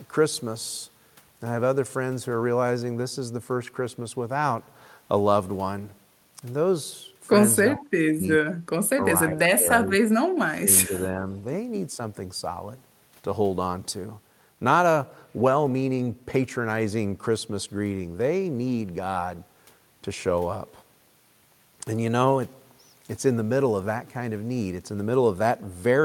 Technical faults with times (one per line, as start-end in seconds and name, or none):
7.73-8.53 speech suppressed in double talk
8.96-9.00 speech suppressed in double talk
9.31-10.02 speech suppressed in double talk
10.42-11.25 speech suppressed in double talk